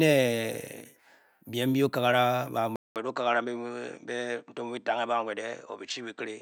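At 2.76 s the speech cuts out for 200 ms, then returns with a narrower, duller tone that lasts to the end of the clip. From there nothing is heard above 8.6 kHz, and a faint new background noise sits far below the speech, at about 55 dB down, while the level stays much the same. The pattern points to a likely input switched to a poorer device, with the recording carried on through a more limited microphone path.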